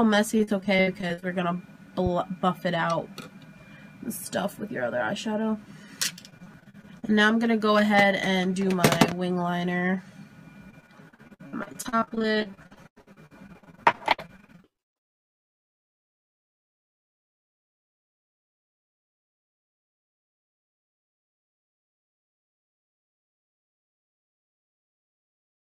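Repeated packet loss (robotic sound) chops the audio at 0.37–1.24 s, 6.14–7.04 s and 10.70–16.72 s: gaps up to 95 ms are patched by repeating the last sound, showing as smeared, stuttering blocks on a spectrogram. A loud pop at 2.06–2.09 s and 9.12–9.14 s, roughly 10 dB above the sound, appears as a thin vertical spike, likely from a plug, switch or driver glitch.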